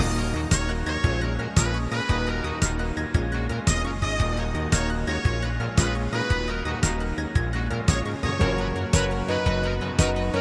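No technical faults can be heard anywhere in this audio.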